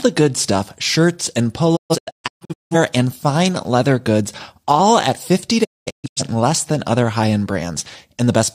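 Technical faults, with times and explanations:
1.75–2.76 s, digital broadcast dropout: right after "good stuff shirts and", the speech breaks into several silent holes over about 0.94 s, losing roughly 0.68 s in all (longest gap 0.17 s). The receiver muted each failed frame with 20 ms fades until "and fine leather goods" came back intact.
5.63–6.22 s, digital broadcast dropout: the speech again drops into scattered silences across about 0.51 s, with some 0.43 s missing and one gap lasting 0.21 s. Corrupted frames were muted and faded over 20 ms, and what was sent then is gone before "less than other high".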